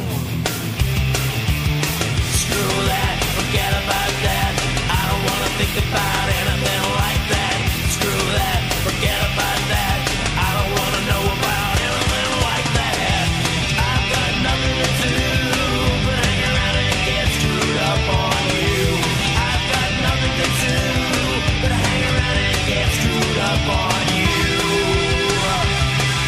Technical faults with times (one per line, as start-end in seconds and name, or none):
13.19 dropped samples
15.16 dropped samples
22.10 dropped samples
22.98 dropped samples
24.41 dropped samples